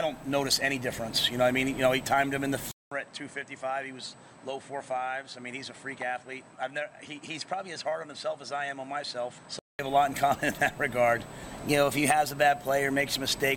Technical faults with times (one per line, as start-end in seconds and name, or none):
2.71-9.79 input switched to a poorer device